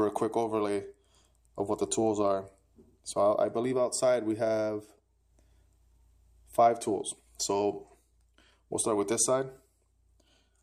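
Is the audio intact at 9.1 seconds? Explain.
No. At 9.12 s there is a single sharp click. It is most likely caused by dropped samples. A handful of samples, well under a millisecond of audio, is missing from the stream. The waveform jumps straight from one value to a later one, with no smooth path between them. That step is what produces the click. The gap is far too short to remove any audible sound. In a spectrogram it would show as a thin vertical line.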